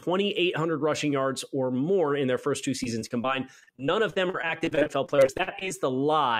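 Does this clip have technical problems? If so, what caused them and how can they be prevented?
Yes. After "in their first two", repeated packet loss (robotic sound) runs from 2.83 to 5.69 s. Dozens of gaps, each up to 43 ms, are patched by stretching the previous sound, leaving choppy audio with pieces missing. On a spectrogram this shows as frequent frozen, smeared slices. In the waveform it appears as repeated chunks and breaks. A more stable network connection and a larger jitter buffer would prevent it.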